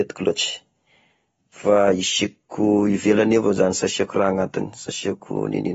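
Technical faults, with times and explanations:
Throughout, AAC compression: the speech has nothing above 7.6 kHz and is plainly damaged, sounding dull and smeared, with a warbling, fizzy texture on sustained vowels and sibilants. The likely cause is AAC-LC coding at a low bitrate, around 24 kbps, which lowers the cut-off and quantises frequency bands so coarsely that holes open or substitute noise fills them. That shifting, swirling grain is what separates it from a simple low-pass filter, which would only dull the sound cleanly.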